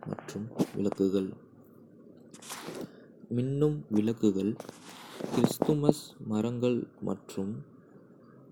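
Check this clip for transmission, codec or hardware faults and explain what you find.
Nothing here points to a transmission, codec or hardware problem; the speech simply runs its course without any fault turning up along the way.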